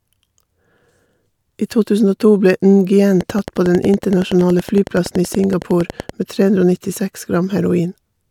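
From 3.21 s to 6.10 s a train of clicks runs over the speech: around thirty sharp, near-identical pulses at a steady 10.7 per second, peaking about 5 dB above the speech and ticking through pauses too. The likely cause is electrical interference or a faulty connection or power supply injecting pulses. On a spectrogram they appear as evenly spaced thin vertical lines spanning all frequencies; in the waveform, as regularly spaced narrow spikes standing above the speech envelope.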